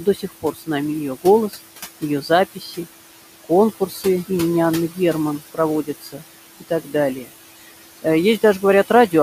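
The noise suppressor artifacts run through the whole thing. The room noise sits only about 14 dB under the speech, and the suppressor is pulling it down by about 16 dB, frame by frame, wherever it decides a band is just steady hiss. So the background drops away in the gaps and comes back up under the talking.

Then there's speech cut by the noise suppressor, where it mistakes bits of the talking for noise and ducks them along with the background. It happens at 0.0–0.69 s, 1.23–1.58 s, 2.01–2.79 s, 3.44–4.3 s, 5.39–6.22 s and 6.6–7.29 s. The drops go as deep as about 12 to 16 dB, and within each window only a few hundred milliseconds or less actually gets hit. Those spots sound swallowed or faint.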